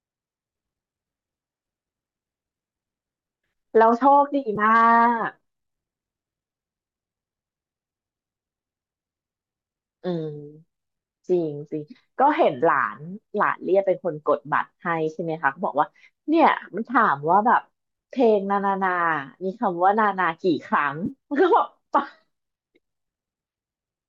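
At 4.56 s and again from 21.06 to 21.10 s, AAC frame loss with concealment leaves brief smeared, phasey patches rather than silent gaps or clicks. The decoder, likely a low-delay AAC stream, rebuilt roughly 10 ms and then 30 ms from the preceding spectrum.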